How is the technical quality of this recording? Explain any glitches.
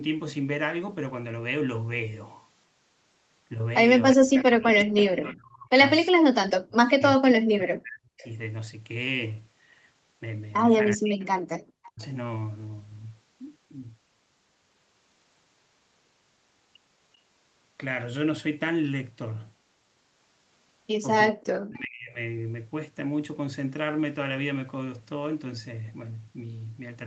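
The recording has two recurring call-path faults, both confined to the first 22.2 seconds. The audio is band-limited to about 8 kHz with coding noise, which fits an Opus call at around 32 kbps.

Speech suppressed in double talk occurs from 4.15 to 8.25 s (about 3 s actually affected), from 10.95 to 12.02 s and from 21.31 to 22.18 s (roughly 0.7 s each). The voice dips sharply, by up to about 40 dB. The likely cause is an echo canceller that could not separate the near talker from loudspeaker echo while both sides spoke, so it turned everything down. These are gated, level-driven gaps rather than the abrupt clicks or warbles of packet loss.

Echo leak appears as faint delayed copies of the voice at 4.39–4.43 s, 5.00–5.04 s, 8.19–8.30 s and 11.59–11.88 s. They arrive about 364 to 389 ms after the original and sit roughly 20 to 30 dB below it, so they sound like short ghosts. The likely cause is a speakerphone on one side whose canceller let some microphone pickup return. 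The fixed, distinct delay of nearly 0.4 s sets these apart from room reverberation, which would be a smooth tail directly following the sound.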